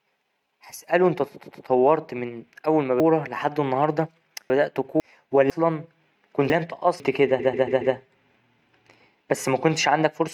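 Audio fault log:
1.42–1.65 s, repeated frames: a 116 ms block loops twice more, so you get a quick stutter, and 232 ms is added.
7.39–7.94 s, repeated frames: same problem, worse. A 139 ms block plays four extra times, adding 557 ms.
3.0–5.0 s, chunks out of order: a 500 ms chunk turns up three chunks late, so the speech briefly jumbles. Nothing is lost, but there are three hard joins.
5.5–7.0 s, chunks out of order: another 500 ms chunk lands two chunks late, giving the same garbled stretch.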